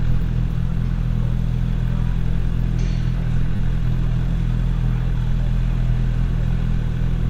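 At 3.56 to 3.59 s, a repeated buffer: one 10 ms piece plays three extra times, giving a brief buzz. The waveform shows identical repeating cycles with hard joins, and the spectrogram shows vertical edges.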